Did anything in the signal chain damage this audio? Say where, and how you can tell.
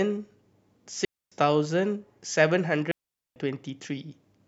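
Yes. A digital wireless dropout: the receiver lost the link and muted, leaving clean near-silent holes from 1.05 to 1.32 s and 2.91 to 3.36 s, with no noise bursts.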